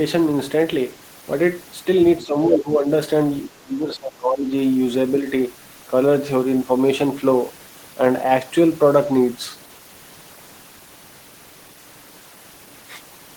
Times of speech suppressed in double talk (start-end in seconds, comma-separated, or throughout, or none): 2.21-2.87, 3.57-4.52